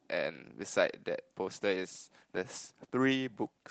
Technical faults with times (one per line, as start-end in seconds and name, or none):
0.67-0.73 lost packet rebuilt from error correction
2.55-2.57 lost packet rebuilt from error correction